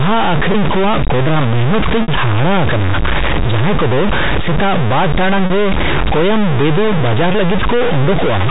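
A distortion runs through the whole speech recording, and the pauses never go quiet but fill with noise. The likely cause is a stuck bit: one data bit held fixed, throwing roughly half the sample values off and flipping with the sign of small signals. All of this sits inside a band that stops at 4 kHz, as expected of the G.711 telephone coding.

There are four brief dropouts, each covered by looping the last pitch period over the gap, the shorter ones heard as a held, buzzy stretch. These are packet loss with pitch repetition. The dropouts fall at 0.52 s (20 ms), 2.02 to 2.08 s (60 ms), 5.46 to 5.50 s (40 ms, just before "ᱨᱮ ᱠᱳᱭᱟᱢᱵᱮᱫᱩ ᱵᱟᱡᱟᱨ") and 7.32 s (20 ms, right after "ᱴᱟᱲᱟᱝ ᱨᱮ ᱠᱳᱭᱟᱢᱵᱮᱫᱩ ᱵᱟᱡᱟᱨ"). The 60 ms gap is long enough for the repetition to fade before speech cross-fades back in.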